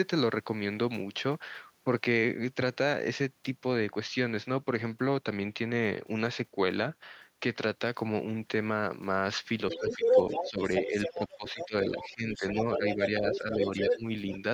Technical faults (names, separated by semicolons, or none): other side's voice leaking through; speech suppressed in double talk